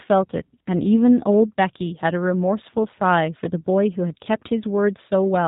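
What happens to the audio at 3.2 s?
At 3.2 s you're hearing G.729 codec damage, present across the whole clip: speech rebuilt from filter and pulse models, band-limited below 4 kHz, rough and synthetic, consistent with 8 kbit/s G.729A.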